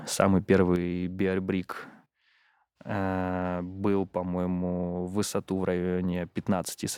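A stereo channel most likely stops delivering signal from about 0.76 s, so one channel drops out and stays gone to the end of the speech. Once the two sides are summed to mono, the material shared by both loses half its contribution, and the level falls abruptly by about 6 dB at that moment. Anything carried only on the missing side vanishes entirely, leaving the remaining speech noticeably quieter.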